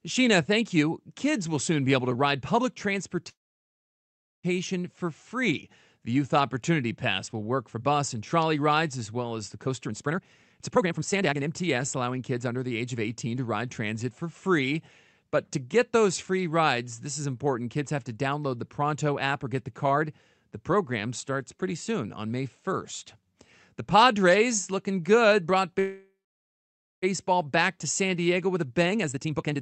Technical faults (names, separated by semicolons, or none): call audio freeze; jitter buffer speed-up